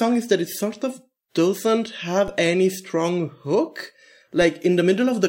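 A speech clip with a single DC step at 2.28 s, between "it sort of doesn't" and "any strong hook": the waveform's zero line jumps by about -23 dBFS and then drains away through a 20 Hz high-pass. It is heard as one low thump. On a spectrogram it shows as a brief broadband smear at the bottom.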